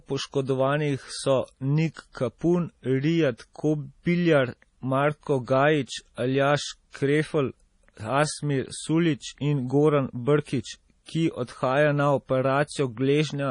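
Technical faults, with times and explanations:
Throughout, MP3 compression: heavy codec damage, with nothing above 10.5 kHz, so the speech loses its top end and sibilants turn watery and swirly as weak frequency lines drop in and out between frames. The damage fits a low bitrate around 32 kbps and is likely the result of MP3 encoding.
6.90 to 6.94 s, pre-echo: a short hiss spreads about 40 ms ahead of a sharp attack, which sounds softened. The transform block spreads quantisation noise sized for the loud onset into the quiet moment just before it.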